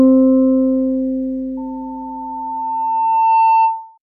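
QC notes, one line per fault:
1.57–3.98 s, loudspeaker feedback squeal: a steady tone near 895 Hz appears in the sound and swells over roughly two seconds until it sits about 5 dB above the rest of the audio, holding as a whistle to the end. The microphone is hearing the loudspeaker it drives, and at this one frequency the loop gain tops unity, so each pass round the loop adds to the tone and it keeps growing.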